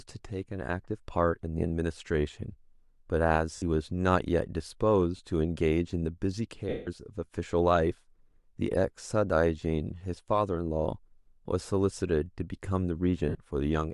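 At 3.56 s the speech breaks for 60 ms. These are lost LE Audio frames. The decoder covers the gap by repeating the last spectrum with random signs, so the sound turns into a brief noisy smear. A shorter 20 ms gap follows at 5.17 s. The longest, 180 ms from 6.69 s, smears and then fades toward silence. A final 60 ms loss comes at 13.29 s. Each gap fits whole 10 ms frames, likely from LC3 coding.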